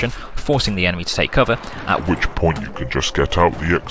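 From 1.99 s, a wrong sample rate, fitting 22 kHz audio played at 16 kHz, slows the sound to 0.726 speed, 5.55 semitones lower.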